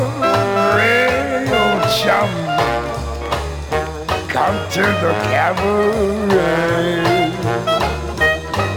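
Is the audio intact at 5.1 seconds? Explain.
Yes, at 5.1 seconds the audio plays through cleanly, with no dropout, click, distortion or other fault to be heard at that point.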